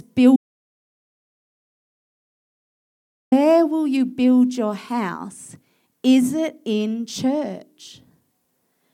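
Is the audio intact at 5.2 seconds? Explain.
Yes, the speech at 5.2 seconds is intact, with no dropout, click, distortion or other fault at that point.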